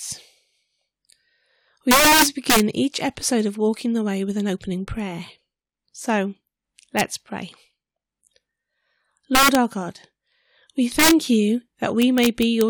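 Speech, with integer overflow cracks at 1.91–2.60 s (just before "each episode of"), 6.99 s, 9.35–9.55 s, 10.99–11.11 s and 12.02–12.61 s, where peaks wrap sign instead of limiting.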